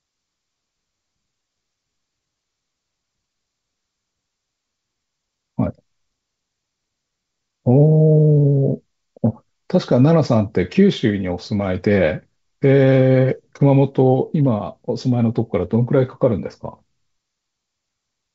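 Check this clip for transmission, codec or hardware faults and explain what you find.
No transmission, codec or hardware faults are audible.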